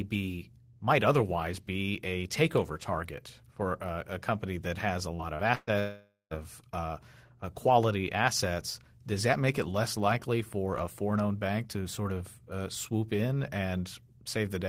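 Short concealed packet loss hits this speech recording twice, at 5.15 to 5.22 s and 5.35 to 5.42 s. Each time about 40 ms of audio arrived too late to decode, and the receiver bridged the hole by extending the preceding sound before blending back, leaving a brief smear or wobble. A burst of packet loss follows at 5.55 to 5.70 s. Roughly 120 ms went missing, and the receiver stretched the last sound for about 121 ms, letting it fade into a held buzz or hiss with a 20 ms silence before the audio picks up further along. A long network dropout then runs from 5.79 to 6.34 s. The sound is continued and fades for about 517 ms, leaving 170 ms of silence, and returns with roughly 520 ms of material gone. The likely cause is a stretch where no packets reached the receiver at all.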